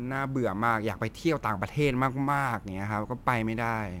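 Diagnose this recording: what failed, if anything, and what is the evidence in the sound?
The converter's sample clock is unstable, a case of sample clock jitter, with timing wander of a few microseconds. Each sample lands slightly early or late, so the error scales with how steeply the waveform is changing. Throughout the speech, a grainy hiss rides on the louder and brighter sounds, sitting roughly 35 dB below the signal, and it disappears in the pauses. Noise that tracks signal slope and vanishes in silence points to the clock, not to analogue hum.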